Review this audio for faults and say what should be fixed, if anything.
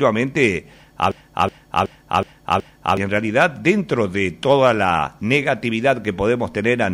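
A system hang loop runs from 1.12 to 2.97 s. The host froze while the sound hardware kept replaying its ring buffer. One 0.37 s piece repeats five times at 2.69 Hz. That length fits a 16384-sample buffer. About two seconds of audio are lost. Prevent it by finding and removing the driver or system stall that stops the buffer being refilled.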